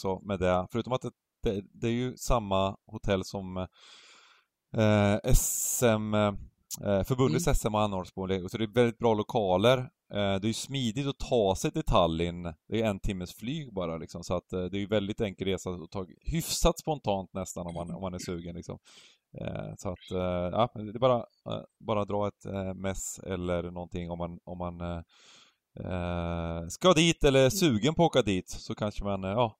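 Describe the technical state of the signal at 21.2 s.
At 21.2 s the speech signal is intact, with no audible fault at that moment.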